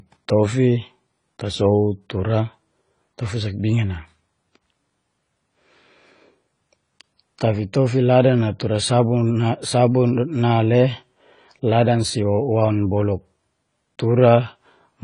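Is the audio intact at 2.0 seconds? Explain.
No. At 2.0 seconds the speech sounds dull and smeared, with a warbling, fizzy edge on sibilants and nothing above 10 kHz. This runs through the whole clip and is likely AAC compression at a low bitrate, around 24 kbps.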